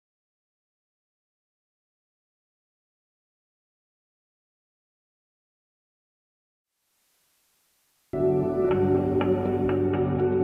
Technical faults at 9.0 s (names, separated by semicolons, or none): digital radio blending to analogue